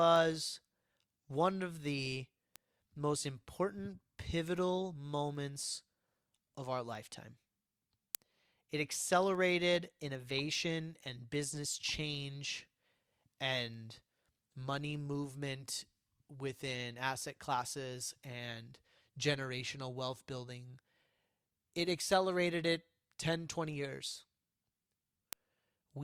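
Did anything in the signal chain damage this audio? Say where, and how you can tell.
Yes. Word clock ticks run through the speech from 0.16 to 25.73 s, about seventy of them, roughly every 0.4 s. The fault is at the digital link into the converter. The receiver ran unlocked, about 50 ppm off. Each slip drops or repeats one sample.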